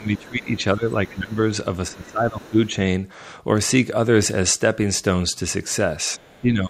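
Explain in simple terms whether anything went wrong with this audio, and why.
Speech suppressed in double talk happens three times: from the start to 1.38 s, from 1.9 to 2.69 s, and from 6.17 s to the end. The speaker's voice sinks in volume and comes back, most deeply in the first stretch and only mildly in the last. The likely cause is both people talking at once, which leaves the echo canceller unable to tell its own talker from the loudspeaker echo, so it turns everything down.

Other side's voice leaking through appears at 1.07 to 1.34 s, in a very short scrap at 2.46 to 2.50 s, and again at 6.26 to 6.42 s. Underneath the speaker you can hear a second, much fainter voice. It likely comes from the far-end caller playing on this device's loudspeaker. The microphone picked that sound up, and the echo canceller failed to remove all of it, so traces of the other person slip through, each time during one of the dips.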